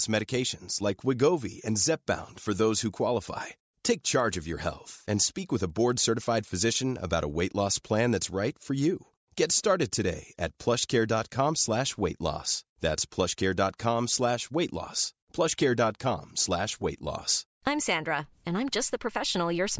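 From 3.9 s to 7.7 s, just after "for those who qualify" and up to "plan that's right for", a steady ticking at 10 per second rides on the speech, present only where there is signal. This is a resampler restarted on every block. Each chunk was converted on its own, which fits 100 ms blocks and a 44.1 kHz to 16 kHz conversion. Each restart lacked the neighbouring samples and left a small error at every block boundary.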